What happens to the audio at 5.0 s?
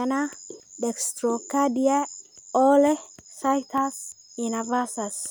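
Nothing goes wrong at 5.0 s; the speech carries on intact through that moment, with no dropout, click, glitch or other fault to be heard.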